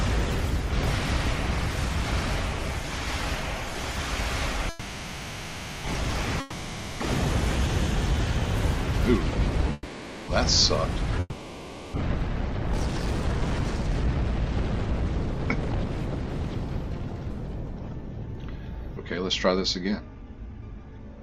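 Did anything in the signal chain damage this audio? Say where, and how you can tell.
Yes. The network stage damaged it in four ways.

Call audio freeze: at 4.69 to 5.86 s and 9.73 to 10.30 s, packets were likely held up and the jitter buffer emptied. The last sound stretches into a fading buzz, then resumes with nothing lost.

Long network dropout: at 6.40 to 7.02 s and 11.20 to 11.96 s, audio likely never arrived. A decaying fill covers 0.6 s and 0.74 s, and playback returns further on without them.

Jitter buffer speed-up: at 12.64 to 17.54 s (102% speed, about a tenth of a second trimmed) and 19.39 to 21.21 s (106%, roughly 0.15 s), pitch-period pieces were cut. The later stretch hurries at unchanged pitch.

Skip ahead: at 18.95 to 18.98 s, roughly 0.2 s was dropped while later audio waited. Playback jumps forward with an almost direct splice.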